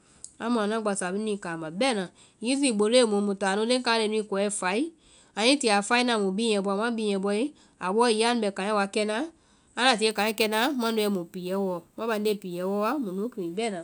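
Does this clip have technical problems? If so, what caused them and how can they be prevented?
Yes. From 10.11 to 13.57 s the speech picks up a bright metallic fizz that rises and falls with the voice. That's imaging from sample-and-hold upsampling: each sample was simply repeated to raise the rate, which fits a jump from about 22 kHz to 48 kHz. Mirrored copies of the spectrum land from 11.03 to 22.05 kHz, roughly 21 dB below the speech. To prevent it, resample with a proper interpolating low-pass filter rather than sample repetition.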